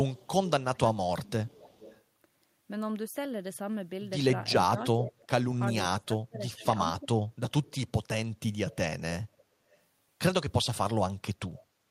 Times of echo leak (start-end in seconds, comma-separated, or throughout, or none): 0.14-2.03, 4.79-5.45, 6.48-6.64, 8.70-9.77